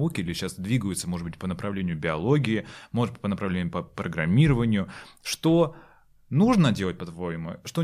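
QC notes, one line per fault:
No faults heard anywhere in this speech recording.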